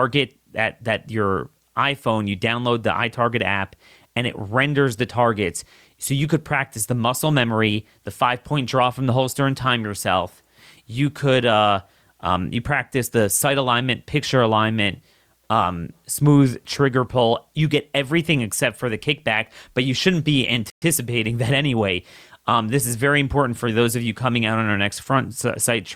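At 20.7 s the player likely ran short of data, causing a playback stall: the speech cuts to silence for 120 ms, then resumes at 20.82 s.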